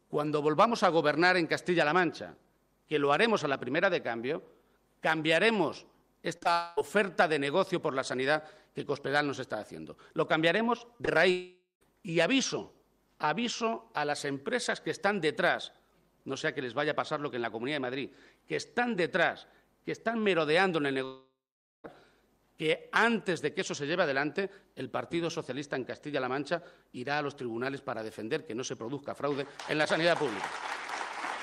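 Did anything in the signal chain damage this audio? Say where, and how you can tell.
Yes, the damage happened in the network stage. Short concealed packet loss appears at 6.37 to 6.43 s, 6.43 to 6.47 s, 10.97 to 11.01 s and 11.05 to 11.09 s. Each gap is 20 to 40 ms, which fits one or two missing packets. The receiver patched each hole by extending the preceding sound, so you hear a brief smear or wobble rather than a cut. The patch then blends back into the real audio.

Longer gaps follow at 6.53 to 6.79 s, 11.31 to 11.83 s and 21.05 to 21.86 s, most likely a long network dropout each time. They differ from the short losses because the patched sound holds, then thins into a fading buzz or hiss. In the 0.5 s gap, the last 0.13 s or so is near-silent. In the 0.8 s gap, the last 0.48 s or so is near-silent. The audio then returns further on, with that stretch simply gone.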